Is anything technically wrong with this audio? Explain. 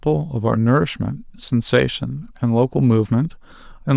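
No, nothing technically wrong can be heard in this speech clip. No part of it points to a problem in how the audio was captured or delivered.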